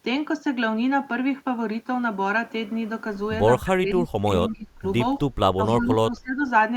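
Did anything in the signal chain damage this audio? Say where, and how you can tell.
Yes. The call processing's echo canceller likely confused this talker with far-end echo during double talk, so it attenuated both. This speech suppressed in double talk dips the speech at 3.62–4.31 s, 4.48–4.83 s and 5.56–6.43 s, by up to about 25 dB.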